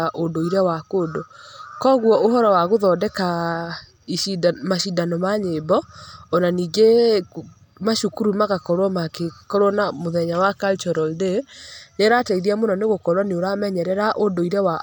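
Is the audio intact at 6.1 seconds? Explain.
Yes, the speech at 6.1 seconds is intact, with no fault to be heard at that point.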